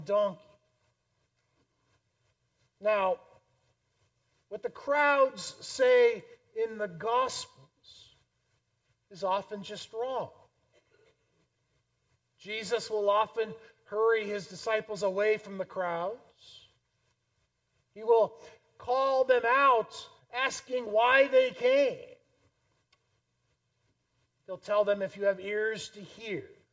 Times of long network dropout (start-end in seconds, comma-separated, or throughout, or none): none